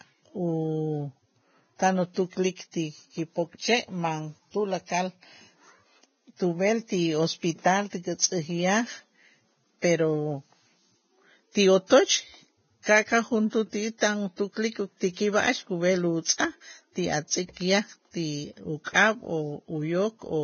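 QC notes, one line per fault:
Throughout: Vorbis compression, likely at a very low rate near 16 kbps. Heavy grainy hiss replaces treble detail. The spectrogram shows nothing above 6.5 kHz and speckled upper bands.
16.24 s and 18.84–18.86 s: pre-echo. Quantisation noise spreads back before sharp speech attacks, about 18 and 22 ms. The waveform shows short hiss preceding each onset, which blurs it.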